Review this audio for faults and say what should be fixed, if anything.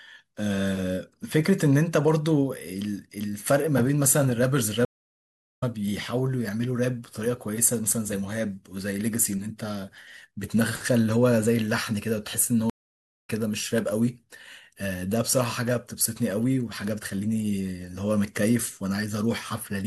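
The speech drops out twice. From 4.85 to 5.64 s it falls silent for about 0.77 s and comes back roughly half a second further on, and from 12.70 to 13.30 s a 0.59 s gap skips ahead about 0.7 s. Both are stream reconnects: the connection broke, the player reconnected, and it started a fresh decoder at the stream's current live position, so the audio sent during the outage is lost. A larger client buffer with automatic resume from the last received position would hide short network drops like these.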